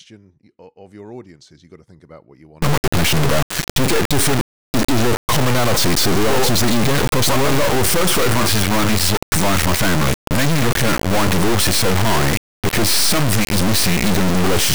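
From 2.62 s, right after "about what you want", the audio turns into an integer read as float fault. Samples stored as 32-bit integers are interpreted as 32-bit floats, so values land near zero or far past full scale. You get a brutally loud, buzzing square wave that falls silent in quiet moments, all the way to the end.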